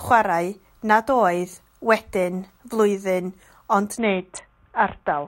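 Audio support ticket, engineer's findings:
Bluetooth SBC bit pool drop, 3.98 s to end of clip. Speech goes dull and gritty; highs vanish. Phone's SBC encoder likely throttled on a congested link; sound points to bit pool falling from around 28 to 5, roughly 54 kbps. Top sub-bands starved, rest coarsely quantised. Doesn't recover before the clip ends.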